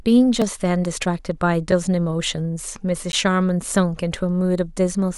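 Three blocks of digital silence interrupt the speech, at 0.42 s (about 2 ms), 1.72 s (5.8 ms, fitting a 256-sample buffer) and 3.12 s (11.6 ms, fitting a 512-sample buffer). The output buffer likely went unfilled, so the audio drops abruptly to silence and back, giving a tick or dip.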